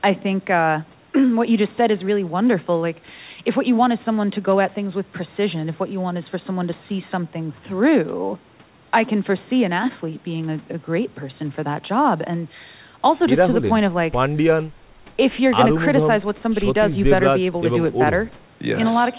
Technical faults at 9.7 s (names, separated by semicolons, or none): none